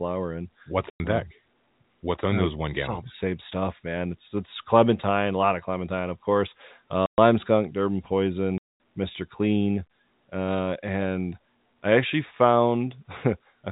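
Packet loss filled with silence hits at 0.90 s, just before "um deck", at 7.06 s after "of clementine of course", and at 8.58 s. Each time the audio drops to hard silence with hard edges.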